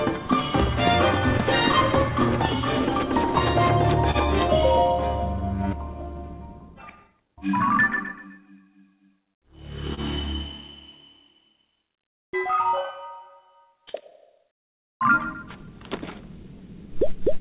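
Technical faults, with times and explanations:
Throughout: clock drift between sender and receiver. The timing drags slightly, because the sender's clock runs about 1% slow, so the receiver's buffer keeps draining.
0.43–17.14 s: repeated timing corrections. Faint, unevenly spaced hiccups and a slightly slowed tempo as the receiver repeats short pieces, adding roughly a tenth of a second overall.
4.11–4.17 s and 9.94–10.00 s: short stall from a late packet. The sound hangs for 28 ms with a slight buzz or dip, held while a late packet arrived; nothing is lost.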